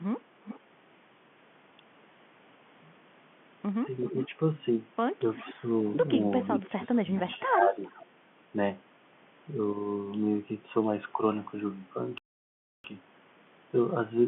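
At 0.44 to 0.60 s a faint delayed copy of the speech appears, about 0.39 s behind the original and well below it in level. This is an echo leak, likely from a far end on loudspeaker whose echo canceller let part of the microphone pickup through. The same copy returns at 4.05 to 4.28 s, louder at roughly 10 dB under the speech, and again at 5.38 to 5.54 s, quieter. From 6.55 to 8.05 s it runs for a longer stretch at a delay of 0.42 s.

Overlapping these echoes, the main speech dips. This is speech suppressed in double talk, likely caused by the canceller mistaking the talker for echo and attenuating both. The dips come at 4.11 to 4.34 s (roughly 10 dB), 5.54 to 5.64 s (a shallow dip of a few dB), and 6.62 to 7.77 s. The last is the deepest, at roughly 15 dB, and affects well over half a second of speech in pieces.

From 12.18 to 12.84 s the audio cuts to silence mid-flow for about 0.66 s and then resumes. 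This is a playback stall, likely the player running short of data or being blocked before recovering. The gap is long enough to hear as a clear break, distinct from the band-limited 150 Hz to 3.4 kHz telephone sound of the G.711 line around it.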